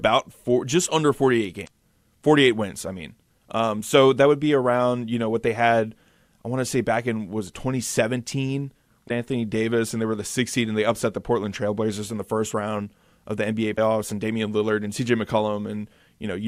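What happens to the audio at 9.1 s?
At 9.05 to 9.11 s the speech is broken by damaged data in the compressed stream. The decoder misreads the corrupted frames, loses sync and hunts for the next valid frame header, producing a brief chirp or squawk about 56 ms long before the audio resumes.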